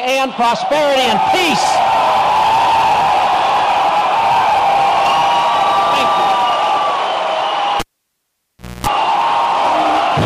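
Cable pulled and plugged in at 7.80 to 8.87 s: a pop, about 1.02 s of near silence, then 0.25 s of 60 Hz mains buzz as the tip reconnects, and a second pop.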